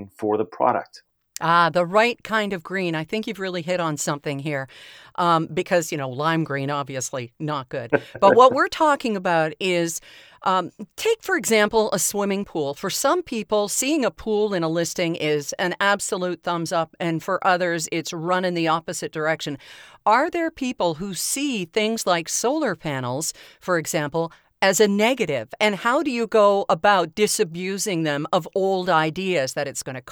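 No technical faults can be heard at any point in the speech.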